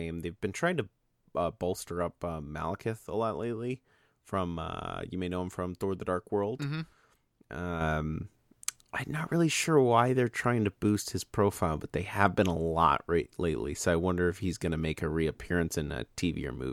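A gain setting likely applied without any ramp at 7.81 s produces a sudden gain jump: the level steps up by about 6 dB from one sample to the next and stays there to the end, so the speech and its background noise grow louder together at once.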